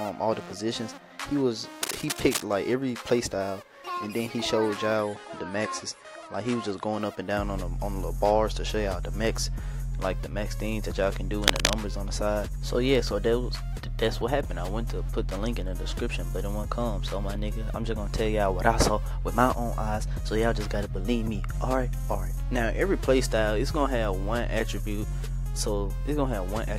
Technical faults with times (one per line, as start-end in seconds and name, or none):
1.83-2.43 cable scratch noise
5.01-7.01 adaptive stream at a lower bitrate
11.44-11.82 cable scratch noise